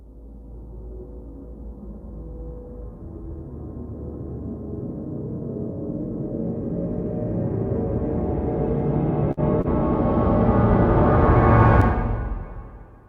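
At 9.31 s and 9.61 s, a short stall from a late packet briefly holds the sound, 58 ms then 33 ms. Unlike a dropout, playback resumes in place and nothing is lost.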